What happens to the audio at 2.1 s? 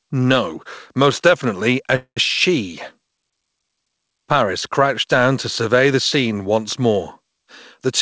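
A call audio freeze runs from 1.96 to 2.19 s: the last sound is stretched into a fading buzz or hiss, then about 90 ms of silence. The likely cause is delayed packets draining the jitter buffer. Unlike a dropout, nothing is skipped; playback resumes exactly where it stopped.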